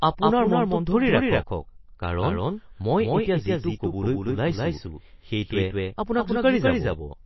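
From start to end, every stretch of speech is followed by a second full-band copy roughly a fifth of a second behind, at about the same level, most likely a doubled audio track captured twice through paths of different speed. Unlike an echo or reverb, the copy has no decay and no room colour.

Throughout the clip, nothing is heard above 5.8 kHz, and the remaining band sounds plainly watery and swirly, with smeared attacks. That points to MP3 compression at a low bitrate, around 24 kbps, where weak frequency lines drop in and out. A simple low-pass filter would dull the sound without the swirl.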